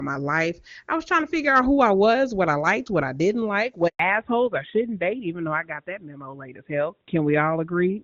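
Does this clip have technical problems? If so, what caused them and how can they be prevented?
Yes. A handover gap runs from 3.87 to 3.99 s, right after "what I didn't like": the speech cuts off and about 120 ms of silence follows while the call switches networks. Keeping the device on one network for the duration of the call avoids this.

From 3.99 s to the end there is a fallback to narrowband. Everything above 4 kHz disappears, so the voice turns duller and rougher than the clean wideband sound before the switch, which fits a drop to the AMR-NB codec. Ensuring both networks support HD Voice prevents the downgrade.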